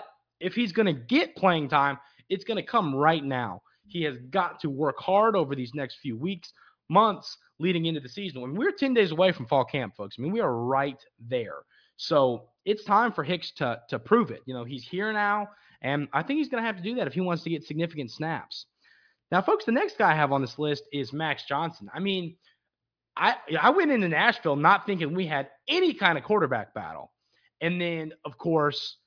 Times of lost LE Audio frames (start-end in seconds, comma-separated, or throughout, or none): none